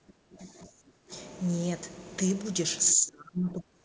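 From 0 to 1.11 s and again from 2.93 s to the end, the speech sinks by up to about 20 dB, then about 30 dB, likely speech suppressed in double talk as the echo canceller ducks the talker along with the echo. The waveform thins abruptly, and spectrogram energy fades.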